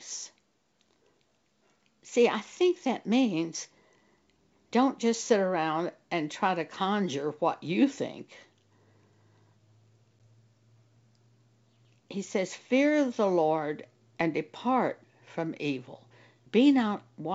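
At 10.19 s, packet loss on an ADPCM call cuts a 10 ms silent gap with hard edges, visible as a blank vertical slot, then the speech returns slightly distorted as the decoder's predictor resynchronises.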